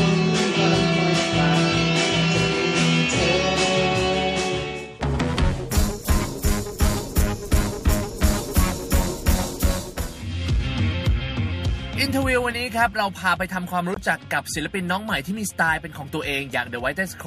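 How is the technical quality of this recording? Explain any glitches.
The recording has one glitch, a short gap near the end. From 13.94 to 13.97 s there is a Bluetooth dropout, likely caused by an audio packet failing to reach the headphones in time and being dropped. The output goes silent for about 20 ms, which fits a single lost packet, and then the sound resumes further along, as though it had kept playing through the hole.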